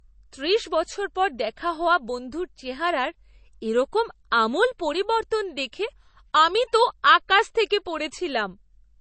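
A speech clip that was likely encoded at a low bitrate, around 32 kbit/s MP3, and then saved again at a high bitrate, so it is low-bitrate audio saved at a high bitrate: throughout, nothing sounds above about 8.3 kHz, leaving it dull, and the larger file cannot restore it.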